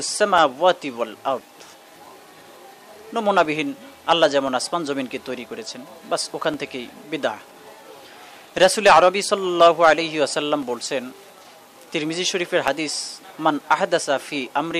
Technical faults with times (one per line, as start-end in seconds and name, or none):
0.38-14.72 periodic USB or driver dropouts